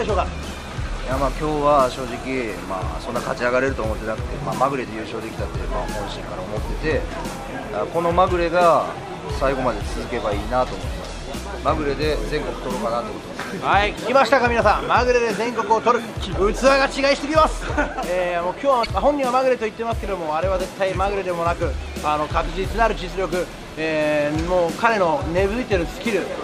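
At 13.94 to 13.98 s and again at 18.82 to 18.87 s, damaged data in a compressed stream corrupts a short run of the encoded frames. The decoder misreads what arrives there, loses its place in the stream and has to hunt for the next valid frame header before normal playback resumes. Each event is heard as a brief chirp, squawk, click or short hole lasting roughly 40 ms, an abrupt break cutting into the audio.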